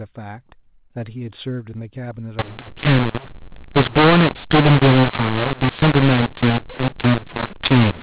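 Mu-law and A-law mixed up from 2.39 s to the end of this telephone speech clip: A-law samples are decoded as mu-law, scrambling levels, roughening the speech and filling pauses with noise.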